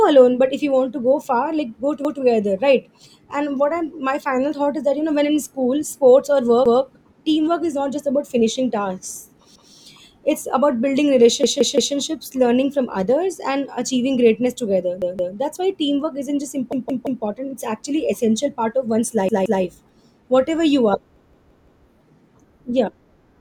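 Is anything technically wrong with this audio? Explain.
Yes, the speech has repeated buffer faults. At 2.05, 6.66 and 9.56 s (just before "it's about building"), one roughly 171 ms piece plays twice. At 11.44 s (after "it's about building", before "learning from others") and 16.73 s it plays four times, at 15.02 and 19.29 s three times, and at 21.16 s (after "you are") five times.

New audio arrived late, so playback looped the last block, which fits an 8192-sample buffer. Each repeat is a stutter with hard joins. Unlike a dropout, there is no silence and no sound is skipped.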